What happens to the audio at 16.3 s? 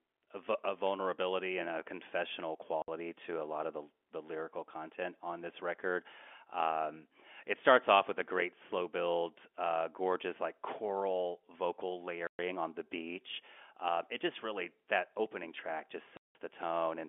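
Packet loss filled with silence cuts the speech from 16.17 to 16.35 s. About 180 ms of audio, consistent with several lost packets, is replaced by silence, and the edges are abrupt. The waveform drops to a flat line, and the spectrogram shows a blank vertical gap.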